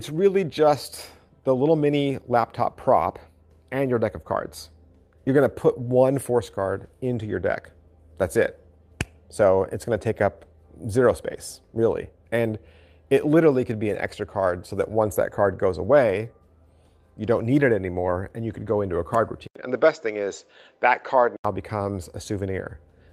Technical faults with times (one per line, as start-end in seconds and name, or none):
19.47-21.45 input switched to a poorer device